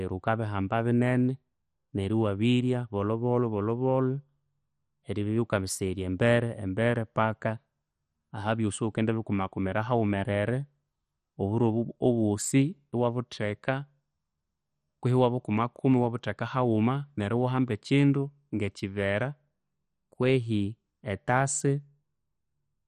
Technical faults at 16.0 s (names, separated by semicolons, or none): MP2 compression